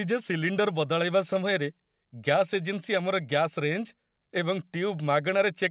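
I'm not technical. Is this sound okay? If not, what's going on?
Yes, it's fine: the speech sounds like it came over an ordinary phone-style call, which is why there's nothing above about 4 kHz, and that's normal for this kind of line.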